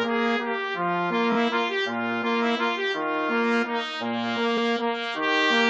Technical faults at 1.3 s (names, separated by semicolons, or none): repeated frames